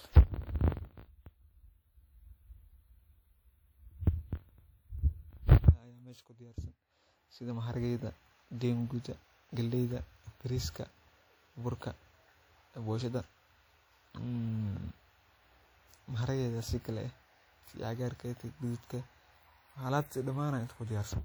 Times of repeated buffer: none

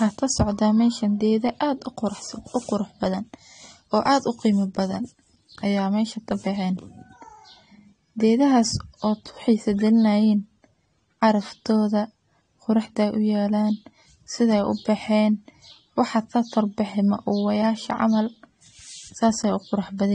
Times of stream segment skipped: none

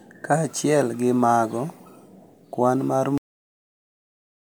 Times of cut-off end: 3.18-4.57

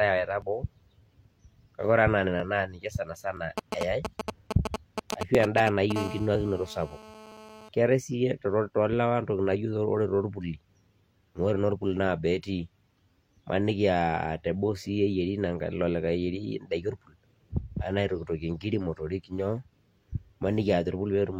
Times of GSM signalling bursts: 3.58-5.92

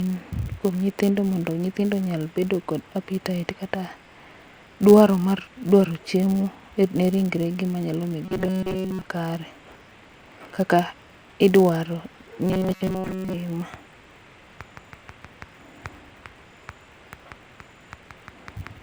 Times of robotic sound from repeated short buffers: 8.25-9.02, 12.47-13.35

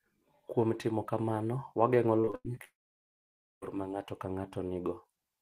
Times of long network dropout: 2.64-3.64

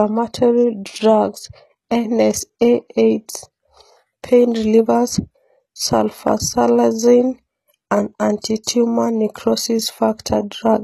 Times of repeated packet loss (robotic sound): none

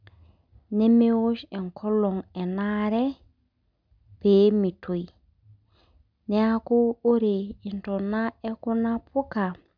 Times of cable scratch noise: none

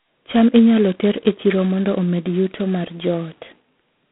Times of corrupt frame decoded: none

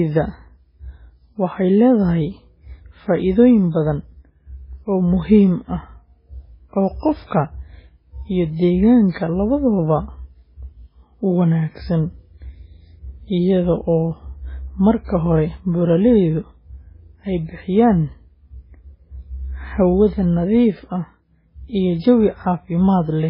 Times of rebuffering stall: none

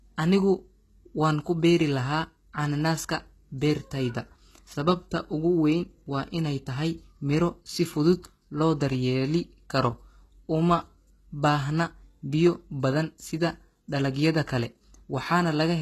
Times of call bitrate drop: none

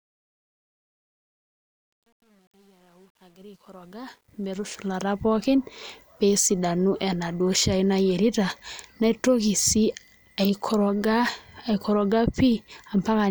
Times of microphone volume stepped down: none

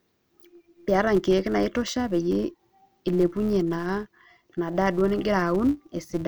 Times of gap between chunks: none

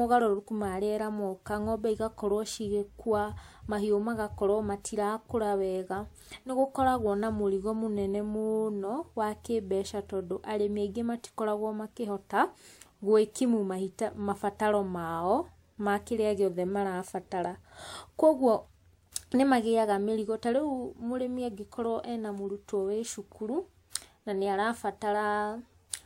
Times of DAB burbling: none

